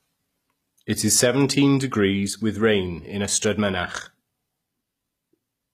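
A short speech clip carries plainly audible codec damage from start to finish, likely from HE-AAC compression, with the sound pointing to a low bitrate around 24 kbps. Nothing sits above 14.9 kHz. The upper band is rebuilt by spectral band replication, copied up from lower bands under a coarse envelope, so its harmonics no longer line up with those beneath the crossover.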